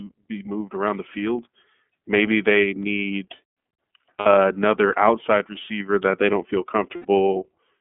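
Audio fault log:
throughout: iLBC codec. Narrowband coding leaves the speech slightly rough and synthetic, fitting a 13.33 kbps mode; the spectrogram shows an empty band above 3.4 kHz and below 200 Hz.
4.19–4.27 s and 6.96–7.06 s: lost iLBC frames. Missing 60 ms and 90 ms stretches become a held, buzzy vowel, with repeated pitch cycles fading in the waveform before clean speech resumes.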